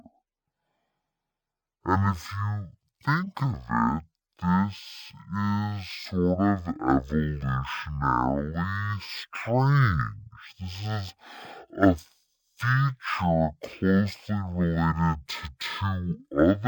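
From start to finish the speech drags at half speed and sits a full octave low, 12 semitones down, with a faint mirror image of the sound showing up in the upper half of the spectrum. This is stereo read as mono: the left and right samples, which alternate in the stream, were played back in sequence as one channel. Each moment of sound therefore takes twice as long to play, dropping the pitch an octave.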